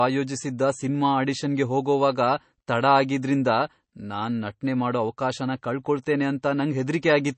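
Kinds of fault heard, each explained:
MP3 compression: The speech has a plainly audible watery, swirling quality, with a metallic chirp on the s sounds and softened consonant attacks, and nothing is heard above 8.3 kHz. This is likely lossy MP3 coding at a starved rate, one that fits roughly 32 kbps. Short of bits, the encoder cuts the treble at a fixed point and drops faint frequency components, which flicker in and out from frame to frame.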